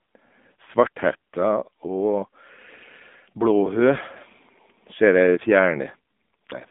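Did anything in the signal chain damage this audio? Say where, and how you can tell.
Yes, at the codec stage: AMR narrowband mobile codec throughout, nothing above 3.7 kHz, a 200 Hz to 3.6 kHz phone band, and a plainly buzzy, synthetic vocal-tract sound fitting roughly 7.4 kbps.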